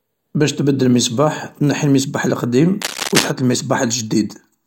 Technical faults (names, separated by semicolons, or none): cable scratch noise